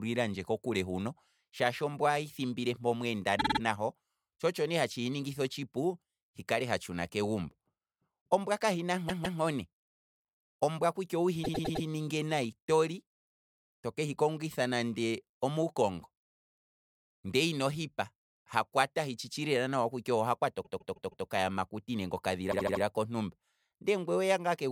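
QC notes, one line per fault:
3.38–3.60 s, 9.08–9.39 s, 11.43–11.85 s, 20.63–21.25 s, 22.51–22.82 s: repeated frames. A short run of compressed frames was delivered more than once, so the decoder replayed the same slice of speech back to back: a 52 ms block four extra times, 157 ms twice, 105 ms four times, 157 ms four times, and 78 ms four times. Each is heard as a stutter. The clip is longer by the replayed time, from about 0.2 s to 0.6 s per event.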